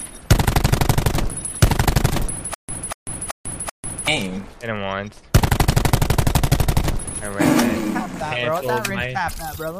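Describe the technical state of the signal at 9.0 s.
Around 9.0 s the signal is intact, with nothing audible that points to a technical fault at that moment.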